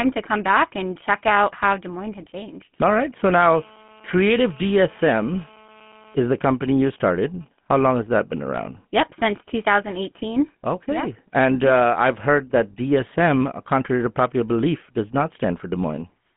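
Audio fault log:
Throughout, GSM full-rate codec: the speech has that buzzy, gravelly roughness of the old 13 kbps GSM codec, plainly audible here. It rebuilds the voice from a vocal-tract model fed by sparse regular pulses, and the line band stops around 150 Hz to 3.4 kHz, so everything sounds boxed-in and thin.
2.20 to 2.29 s, GSM bit errors: a quick burst of squawky, gargling breakup lasting under a tenth of a second. Corrupted bits, at a rate of about 1%, hit the decoder's filter, pitch and gain values over what sounds like a handful of frames, so the spectrum warps and the level jumps.
3.26 to 6.15 s, GSM phone buzz: a hard, raspy buzz sits steadily under the speech at about 25 dB below it, with a 217 Hz fundamental and plenty of harmonics. It behaves like a nearby 2G phone in a call whose transmit pulses are being rectified by the audio circuitry, so the buzz has nothing to do with the speech.
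6.26 to 8.43 s, GSM signalling bursts: right after the steady buzz, the interference turns into even ticks with a longer 217 Hz buzz twice a second, around 30 dB down. That stuttering pattern fits a phone in a call whose user has gone quiet, sending only brief groups of bursts that get rectified into the audio.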